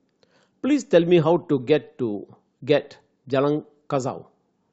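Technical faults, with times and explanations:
No technical faults can be heard in the recorded speech signal at any point.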